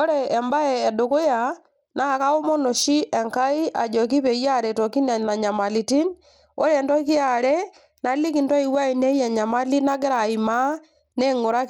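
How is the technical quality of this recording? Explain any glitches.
The technical quality is poor, with plainly audible codec damage from start to finish. Throughout, the treble thins and flickers and a gritty grain rides on the speech, likely from Bluetooth SBC compression at a starved bit budget consistent with about 96 kbps. The weak upper sub-bands lose their bits and the rest are coarsely quantised. A spectrogram would show the highs blinking in blocky patches above a ragged ceiling.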